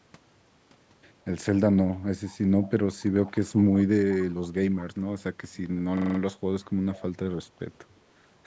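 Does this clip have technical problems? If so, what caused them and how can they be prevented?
Yes. From 2.25 to 4.84 s, and again from 6.63 to 7.02 s, a faint second copy of the speech trails the original by 176 ms, around 25 dB quieter. This is an echo leak, likely caused by a far-end loudspeaker whose echo canceller let part of the microphone pickup return down the line. Unlike room reverberation, it is a distinct, fixed-delay repeat rather than a smooth decay. Using headphones at the far end, or a better-tuned echo canceller, would prevent it.

Between 5.97 and 6.19 s, one 42.67 ms fragment repeats exactly five times, producing a stutter at about 23.4 Hz. This is a system hang loop: the computer or driver stalled while the audio hardware kept replaying the same ring buffer. The length fits a 2048-sample buffer. Unlike the echo, each repeat is identical and at full level, not a delayed and quieter copy, and little or no speech is lost. 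Keeping drivers updated and reducing system load would prevent these stalls.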